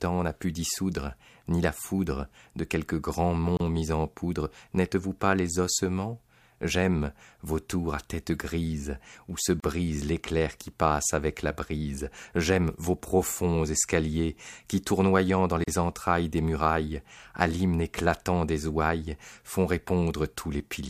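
At 3.57 to 3.60 s, 9.60 to 9.64 s and 15.64 to 15.68 s the speech drops out for about 31, 37 and 37 ms, at a steady 6 s spacing. Each is a gap at a join of encoded pieces: separately encoded segments were butted together with the encoder's start-up delay and last-frame padding left in. The result is a brief hole with smeared edges, after which the speech resumes exactly where it broke off.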